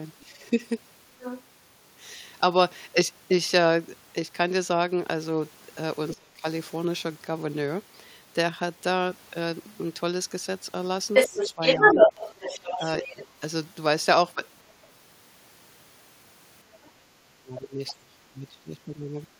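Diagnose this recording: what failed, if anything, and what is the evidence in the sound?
Other side's voice leaking through, at 0.2 to 1.42 s (about 10 dB below the speech), 11.13 to 14.72 s (about 5 dB above it) and faintly at 17.87 to 17.93 s. This is call processing: the echo canceller likely left loudspeaker pickup in the microphone signal.

Speech suppressed in double talk, at 0.26 to 0.38 s (a slight dip of about 5 dB), 6.13 to 6.45 s (a deep cut of about 30 dB), 11.28 to 13.41 s (broken dips of about 10 dB) and 16.77 to 19.36 s (drops of about 25 dB). The likely cause is the same echo canceller: with both sides talking at once, it turned the talker down along with the echo.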